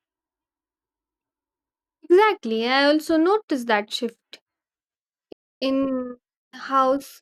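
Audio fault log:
5.32–5.62 s, playback stall: speech halts into clean silence for about 290 ms, then resumes, likely because the player ran short of data or its thread was blocked.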